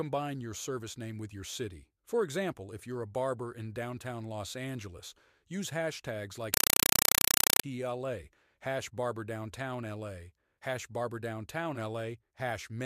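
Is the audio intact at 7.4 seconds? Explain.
No. From 6.54 to 7.64 s, after "use hashtags like", a compressed stream is played as audio: undecoded AC-3 bursts, 31 a second, give loud chattering static.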